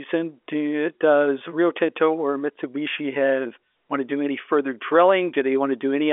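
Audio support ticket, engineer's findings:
No faults found in this speech.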